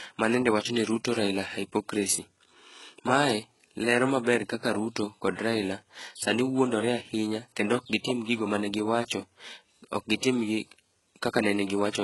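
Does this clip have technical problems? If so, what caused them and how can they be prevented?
Yes. Throughout, the speech has gritty, lispy sibilants and nothing above 11.5 kHz, likely HE-AAC compression at a very low bitrate, near 12 kbps, with band-replicated treble. Encoding at a higher bitrate or with a full-band codec prevents it.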